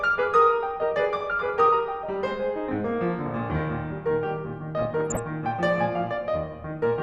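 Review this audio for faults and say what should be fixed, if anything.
DAB burbling from 4.79 to 5.19 s: residual bit errors corrupt MP2 sub-band samples and scale factors, so bands jump in level and bubble over the music. Fix it by improving reception with a better antenna or siting.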